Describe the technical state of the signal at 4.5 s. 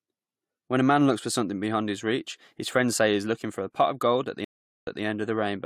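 At 4.5 s the signal is inside a stream reconnect spanning 4.45 to 5.03 s, just after "for the pot of". The connection dropped and the audio goes silent for about 0.42 s while the player reconnects and restarts its decoder mid-stream. When sound returns, it picks up 171 ms earlier than where it broke off, so a short stretch of speech is heard twice, consistent with the server resending a burst of recent data.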